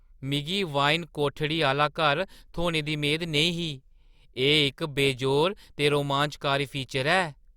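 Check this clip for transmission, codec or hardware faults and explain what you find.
Nothing stood out on listening to this speech clip.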